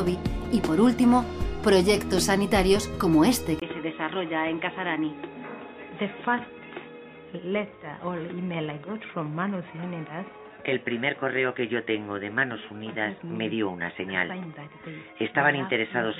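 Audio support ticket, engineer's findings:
Input switched to a poorer device at 3.6 s, persisting to end of clip. There is a 20 ms dropout at the switch, then dull, boxy, band-limited sound. On the spectrogram, everything above 3.8 kHz is empty after the gap, and a new noise floor sits about 30 dB below the signal. On the waveform, a short flat gap is followed by an envelope about 5 dB lower. The likely cause is capture rerouted to a lesser microphone or a headset call profile.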